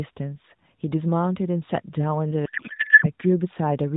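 Codec payload misread from 2.46 to 3.08 s turns this speech clip into garbled noise and warble that barely follows the talker. The decoder seems to be parsing AMR frames with the wrong bit packing, which fits octet-aligned frames being read as bandwidth-efficient, so every field lands in the wrong place. Elsewhere the narrowband AMR coding is audible as a ceiling at 4 kHz and only light coding texture.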